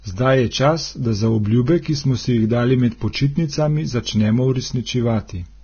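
Heavy coding at a very low bitrate, likely Vorbis compression, runs through the whole speech clip. Nothing survives above 6.5 kHz, and the remaining treble is quantised so coarsely that detail turns into grainy hiss, which fits a rate near 18 kbps.

From 3.13 to 3.15 s, just after "si jih dali med", the codec spreads quantisation noise across a block holding a sharp onset. This pre-echo leaves about 24 ms of hiss ahead of the attack and makes the attack itself sound smeared.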